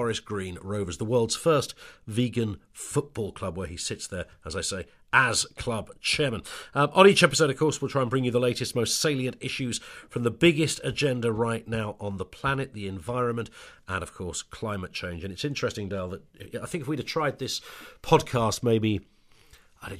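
Nothing in this speech recording calls for comment on the technical side, as there's simply no fault to point to at any moment.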